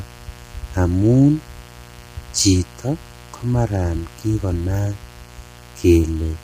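A mains buzz runs under the speech from start to finish. Sharp switching spikes from the 60 Hz supply leak into the signal twice per cycle. This creates a ladder of harmonics. It sounds like a steady, raspy drone, roughly 25 dB below the speech.

The speech itself is rough and grainy throughout. Noise fills the gaps between the pitch harmonics, and nothing is present above 15.6 kHz. This is likely low-delay AAC compression. Its short frames resolve harmonics poorly, and the heavy damage points to a bitrate near 24 kbps.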